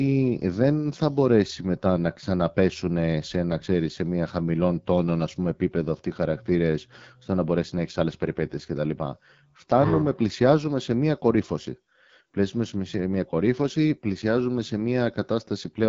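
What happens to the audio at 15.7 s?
At 15.7 s the speech is still carrying the AMR wideband (HD Voice) codec damage that runs through the whole clip. The codec rebuilds the voice from a pulse-driven vocal tract model up to 6.4 kHz and fills the band above with shaped noise, leaving nothing above about 7.5 kHz. The harsh, raspy texture here points to one of the codec's lowest rates, around 8.85 kbit/s, where that model is too coarse to sound natural.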